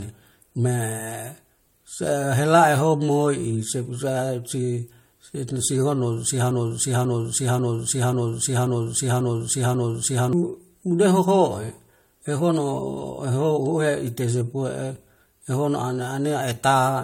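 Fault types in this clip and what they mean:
Transcoding between lossy codecs: Nothing in the speech reaches above 16.6 kHz, and two flavours of compression smear sit on top of each other. That mix likely comes from an MP3 encode re-encoded to AAC-LC, with the second codec adding its own artefacts while wasting bits on the first's.
Broken-record loop: From 6.51 to 10.33 s, one 0.54 s fragment plays seven times back to back, identical each pass, and whatever speech belonged there is gone. The likely cause is a stalled player, encoder or stream that kept resending its last buffer.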